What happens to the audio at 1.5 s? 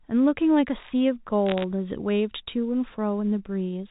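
Bit errors on a digital phone line hit from 1.46 to 1.64 s. A small fraction of the bits on this G.711 A-law line flip, and each one corrupts a single sample. That scatters sharp ticks and brief crackle over speech that is otherwise unchanged.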